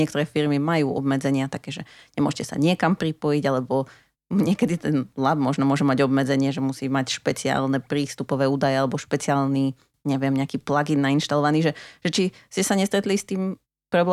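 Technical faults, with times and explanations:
6.3–10.9 s: resampler restarted on every block. The rate converter, which fits a 44.1 kHz to 48 kHz conversion, treated each 100 ms block in isolation, leaving a small error at every block edge. This is heard as regular ticks at 10 Hz under the speech.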